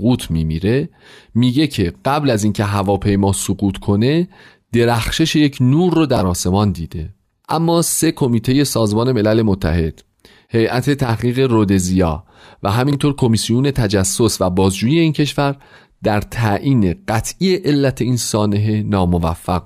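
At 6.17 to 6.21 s, and again at 12.91 to 12.95 s, the speech has chunks out of order. A block of about 21 ms plays one slot late, after the block that should follow it. This gives a brief jumbled stutter. Unlike a dropout, no audio is missing.

From 11.04 to 11.09 s the level falls abruptly by about 6 dB for 50 ms and then returns. The flat, sudden step, rather than a gradual fade, points to one channel dropping out as the likely cause before the mono sum.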